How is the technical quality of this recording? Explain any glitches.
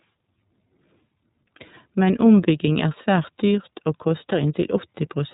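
The technical quality is limited by plainly audible narrowband coding that runs through the whole speech clip. The iLBC codec caps the band at 4 kHz, and each frame's excitation is coded independently, which fits 30 ms frames near 13 kbps. The result sounds a little rough and synthetic, and a spectrogram would show a hard ceiling at 4 kHz.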